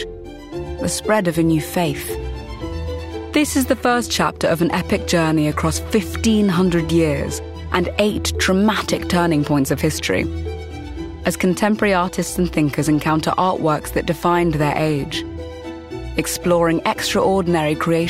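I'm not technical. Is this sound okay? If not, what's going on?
Yes, no faults here.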